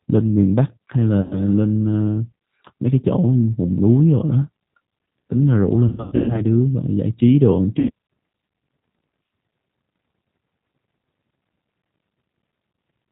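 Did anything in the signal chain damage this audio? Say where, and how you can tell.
Yes. At the codec stage, G.729 compression at 8 kbit/s runs through the whole speech clip. Nothing above 4 kHz survives, and the voice has a plainly rough, synthetic grain from being rebuilt out of a filter, pitch predictor and sparse pulses. That grain, not just the dull top end, separates it from simple band-limiting.

At the network stage, VoIP packet loss concealed by the speech codec appears at 1.22 to 1.42 s (80 ms lost), 5.88 to 6.42 s (300 ms scattered over 400 ms, longest run 120 ms) and 7.79 to 7.91 s (100 ms). The decoder stretches the last sound into a fading buzzy tone or coloured noise, and the speech stays weak for a moment afterward. Plain dropouts would instead leave silence or clicks.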